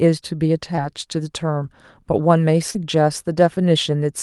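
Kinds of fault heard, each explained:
Short concealed packet loss: 20 ms and 40 ms of speech never arrived in time and were patched by extending the preceding sound, heard as brief smears rather than silent gaps.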